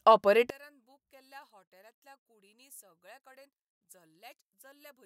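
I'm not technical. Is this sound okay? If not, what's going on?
No. From about 0.50 s to the end, the speech suddenly drops to a faint trace, almost as if it has disappeared. The likely cause is one channel inverted: one side of the stereo signal has its polarity flipped, so when the two sides are combined into one, the voice, which is the same on both, cancels itself out. What you still hear is only the small difference between the two sides.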